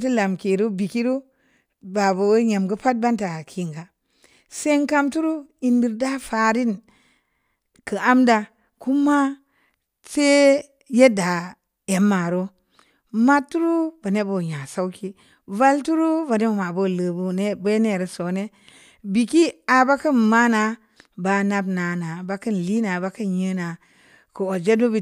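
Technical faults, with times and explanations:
0.00–9.11 s, crude rate conversion: unfiltered linear interpolation, fitting a 32 kHz-to-48 kHz step, adds faint inharmonic fizz riding loud, bright speech, unlike steady hiss.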